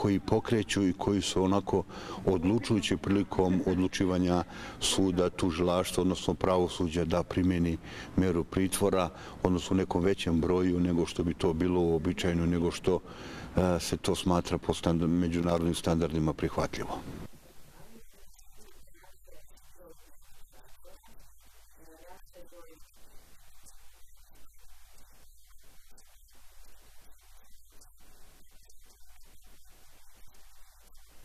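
Loose connector crackle appears from 15.38 to 15.60 s. A worn or dirty contact briefly lost and regained connection, chopping the signal into an irregular burst of scratchy crackle.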